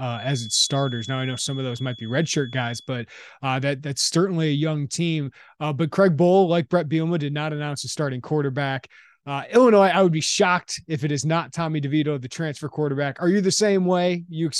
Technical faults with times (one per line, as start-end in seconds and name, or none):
0.00-2.92 feedback whistle